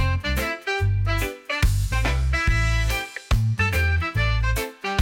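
No technical faults are audible.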